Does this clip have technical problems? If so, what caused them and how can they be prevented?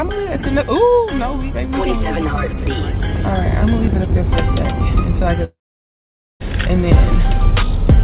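Yes. From 5.44 to 6.42 s the sound trails off into a fading buzz, falls silent, then resumes with nearly a second missing, likely a long network dropout. A stable, preferably wired connection with spare bandwidth would prevent it.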